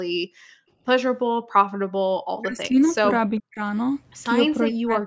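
A speech recording in which the echo canceller clamped the microphone while the loudspeaker played, so the room background drops by about 40 dB from 0.19 to 0.68 s, 1.3 to 1.53 s and 2.02 to 2.14 s. Speech suppressed in double talk, likely from the canceller muting both sides at once, makes the voice dip by roughly 35 to 40 dB from 2.42 to 3.06 s, 3.33 to 3.61 s and 4.6 to 5.06 s. An echo leak, likely from incomplete cancellation, adds a faint, 0.4 s-delayed copy of the voice, well below the speech, around 2.86 to 2.91 s.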